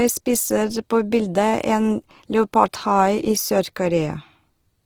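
Throughout, the speech sounds grainy and rough, likely Opus compression near 16 kbps filling bands with noise; a spectrogram shows nearly hole-free texture reaching 20.3 kHz.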